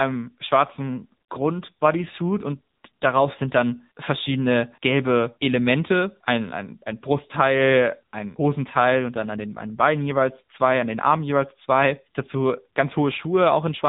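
Speech heard through the AMR narrowband mobile codec for its whole length. Nothing above about 3.8 kHz survives, so the voice is thin and boxed-in, and a spectrogram shows a hard ceiling with everything above it empty. The codec rebuilds the voice from a vocal-tract model fed by sparse pulses, and at this damage level it sounds plainly buzzy and synthetic, which fits one of AMR-NB's mid-rate modes, around 7.95 kbps.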